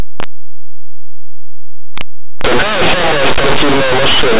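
Throughout, linear audio is read as companded. Plain 8-bit samples are expanded as mu-law codes. Small values just on one side of zero become huge, so the speech is harsh and very loud.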